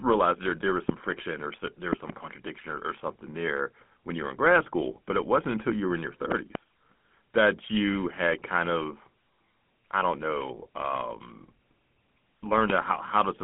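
Speech heard through a GSM full-rate codec for the whole clip. The band runs from about 150 Hz to 3.4 kHz, and nothing is present above 3.8 kHz. The voice has a plainly audible buzzy, gravelly grain. The sound fits a 13 kbps coder that models the vocal tract and drives it with a coarse pulse excitation. Loud pops sit on top of the speech, which carries on underneath. There is one pop at 0.89 to 0.92 s, a pair from 6.32 to 6.57 s, and one at 12.70 to 12.72 s. Each peaks roughly 20 dB above the speech. They are likely voltage steps from a plug, switch or static discharge.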